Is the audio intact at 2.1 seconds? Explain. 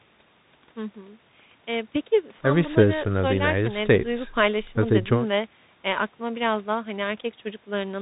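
No, at 2.1 seconds, as throughout, the speech passes through a Bluetooth CVSD headset codec, whose adaptive one-bit steps leave nothing above 3.8 kHz, scratchy s sounds and granular hiss.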